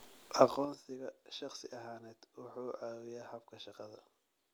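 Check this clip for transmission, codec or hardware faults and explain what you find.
One fault is audible: zipper noise, from 0.37 to 0.84 s. Here the level drops by about 20 dB during the speech. The drop is not smoothed. It falls in coarse steps of 4 dB each, at a rate of roughly ten a second. Every step jumps the waveform abruptly, which puts a small click into the signal. Together the clicks form a ticking, zipping texture riding on the speech while the level moves. Smooth level changes, by contrast, glide without clicks.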